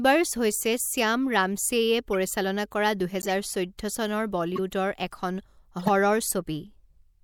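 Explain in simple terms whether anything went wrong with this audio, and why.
Short chirps and squeaky blips cut into the speech at 2.13 s, 3.19 to 3.31 s, 4.56 to 4.59 s and 5.79 to 5.89 s. Each is a corrupt frame decoded: damaged compressed data was played anyway, briefly putting sound at the wrong pitches.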